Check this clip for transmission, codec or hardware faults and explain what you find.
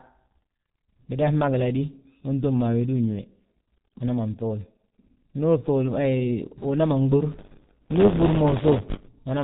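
Two faults are present. The whole clip carries heavy G.723.1 codec damage: its 30 ms frame coding drops everything above 4 kHz and blurs consonants, leaving muffled, hoarse speech; a spectrogram shows a hard ceiling at 4 kHz, and the thin sound points to a bitrate near 6 kbit/s. From 7.31 to 9.08 s, buffer tearing appears: writer and reader cross each period, splicing in a small slice of audio one lap old, around 20 ms earlier. This produces a robotic 100 Hz buzz, with regular waveform discontinuities every 10 ms.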